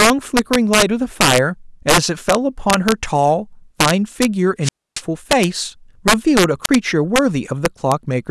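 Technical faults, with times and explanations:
Throughout: integer overflow. The level was pushed about 11 dB past the top of the integer range, and the excess wraps instead of being limited. A peak that should sit at full scale jumps to the opposite extreme. Only around one percent of the samples go over, so the damage falls on the loudest moments of the speech. Each one is a violent crack, much harsher than clipping.
4.62–5.02 s and 6.64–6.69 s: wireless microphone squelch dropout. The FM radio link fades, hiss rises, and the receiver's squelch shuts the output. The first event leaves a hole of near silence about 280 ms long before the speech returns. The second is brief, with a mute of about 33 ms that is heard as a short gap. In both, the static swells just before the cut.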